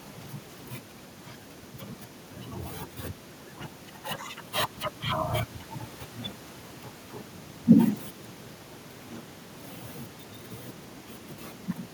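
Nothing technically faulty is audible anywhere in the recording.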